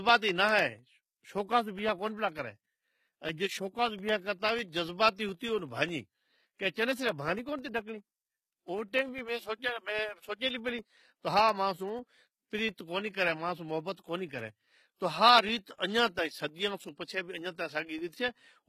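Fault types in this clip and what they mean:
HE-AAC compression: The treble is bright but synthetic, with s sounds turning gritty and metallic and nothing above 14.9 kHz. This points to a low bitrate near 20 kbps, likely HE-AAC rebuilding the upper band from copied lower bands that don't match the original harmonics.
Periodic USB or driver dropouts: Regular ticks recur every 0.1 s from 0.09 s to 18.59 s, some two hundred in all. Each is a gap of about a millisecond of silence where a blocked bus or driver lost a sliver of the speech signal.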